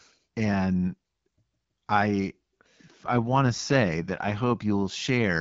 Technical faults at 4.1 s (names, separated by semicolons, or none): AMR rate drop